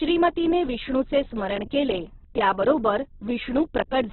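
From start to finish the speech is squeezed into a narrow band, with nothing above about 4.1 kHz, so it sounds boxed-in and dull. The damage is heavy. The voice comes out rough and grainy, with a noisy fizz where detail should be. That's likely Opus compression in its music (CELT) mode at a very low bitrate, which fits something around 8 kbps. Band energy survives, but the fine structure gets swapped for filler noise.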